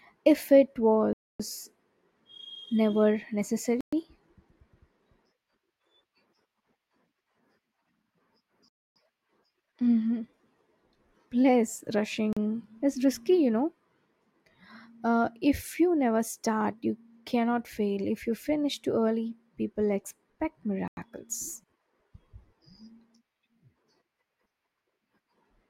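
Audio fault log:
1.13 to 1.40 s, 3.81 to 3.93 s, 8.68 to 8.96 s, 12.33 to 12.37 s and 20.88 to 20.97 s, Bluetooth stall: the speech drops abruptly to dead silence five times, for 266, 120, 275, 37 and 93 ms, then carries on. The likely cause is radio interference delaying packets on the wireless link, so the headphones' small buffer emptied and playback halted until the retransmitted audio arrived.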